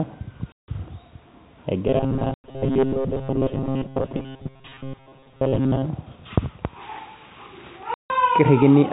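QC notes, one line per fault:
0.53–0.68 s, 2.34–2.44 s and 7.94–8.10 s: packet loss filled with silence. The speech drops to dead silence for 160 ms, 100 ms and 160 ms, with hard edges. Missing packets were replaced with nothing, and the gap lengths fit 20 ms packets.
1.88–5.86 s: robotic sound from repeated short buffers. The speech turns into a rigid, metallic buzz near 134 Hz that still loosely tracks it. New audio likely arrived too seldom, so a roughly 7.5 ms buffer was looped through most of this stretch while real audio was skipped.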